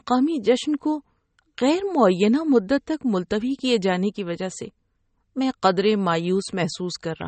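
Speech runs throughout with plainly audible MP3 compression damage, likely from a low bitrate around 32 kbps. Nothing comes through above 8.4 kHz, and the watery, swirling texture as weak components flicker between frames sets it apart from a simple low-pass filter.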